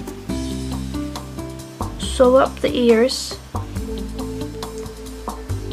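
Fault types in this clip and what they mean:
No faults can be heard.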